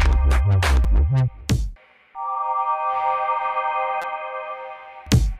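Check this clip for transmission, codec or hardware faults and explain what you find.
Two short repeated-buffer glitches show up. At 0.84 s, a 5.8 ms chunk replays twice, and from 4.02 to 4.04 s it replays four times. Both fit a 256-sample buffer being replayed while new audio ran late. Each is heard as a click or brief buzz, with hardly any sound lost.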